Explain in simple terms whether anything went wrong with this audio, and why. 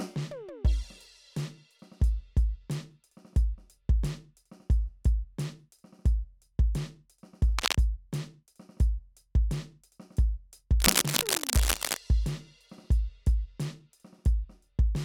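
A harsh scratching, rustling noise cuts across the music twice: a brief burst from 7.58 to 7.75 s, then a longer stretch from 10.80 to 11.98 s. It is loud, nearly as strong as the music itself. This is cable scratch noise, likely caused by a worn cable, plug or control being moved so that its electrical contact flickered rapidly, adding these uneven bursts of noise on top of the music.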